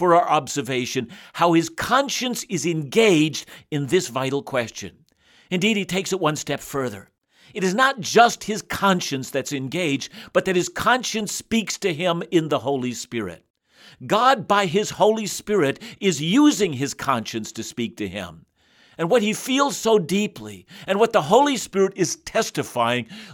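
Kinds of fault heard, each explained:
Drift correction step: speech runs 6% fast and a semitone sharp after "he takes it one", later slow and flat, likely clock-matching rate changes.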